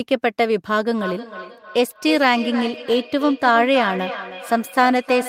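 From 0.98 s to the end, feedback echo between two devices: each word returns roughly every 0.3 s, thinning and ringing, peaking about 11 dB below the speech.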